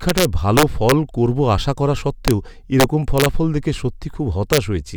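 Integer overflow cracks the speech at 0.09–0.92 s (before "করবো আশা করা"), 2.28–2.31 s (just after it), 2.80–3.26 s and 4.53–4.58 s. Peaks pushed about 1 to 4 dB past full scale wrap to the opposite sign instead of being limited. On the waveform this shows as full-height jumps from top to bottom. On a spectrogram it appears as broadband vertical streaks.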